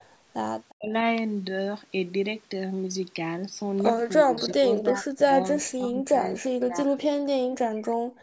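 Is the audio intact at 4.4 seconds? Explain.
No. Speech suppressed in double talk runs from 4.23 to 4.37 s, right before the asked moment. The voice sinks by roughly 10 dB for about 150 ms. The likely cause is an echo canceller facing both parties talking at once: it couldn't separate the near talker from the loudspeaker echo, so it attenuated everything, taking the wanted speech down with it.

An echo leak follows from 4.37 to 4.53 s, covering 4.4 s itself. A faint copy of the voice, roughly 20 dB below the speech, arrives 351 ms after the original. This is likely a far-end loudspeaker whose echo canceller failed to remove everything its microphone picked up, so part of that residue travelled back down the line.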